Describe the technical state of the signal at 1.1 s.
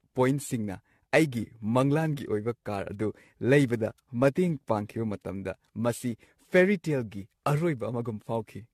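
At 1.1 s the speech carries generation loss, present throughout the clip rather than at that moment alone. It was likely decoded and re-encoded with AAC-LC at 64 kbit/s around seven times, each pass quantising on a shifted frame grid so that noise and spectral gaps pile up. The result is a swirly, hollow, smeared tone, worse than that bitrate alone would give, with consonant attacks blurred and softened.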